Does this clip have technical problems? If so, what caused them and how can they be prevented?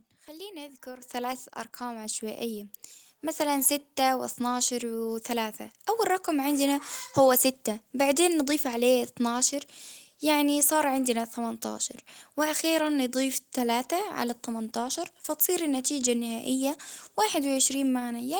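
Yes. Microphone volume stepped up at 1.02 s, between "خليني أذكر" and "ثلاث أرقام": the call software judged the input too quiet and raised the device's microphone gain in a single jump of about 9 dB, so speech and background noise grow louder together at once. Disabling automatic microphone gain adjustment in the call software and setting a suitable input level beforehand prevents this.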